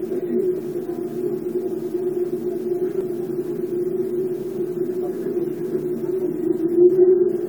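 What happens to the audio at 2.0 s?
Nothing goes wrong at 2.0 s: the sound carries on intact through that moment, with no dropout, click or other fault.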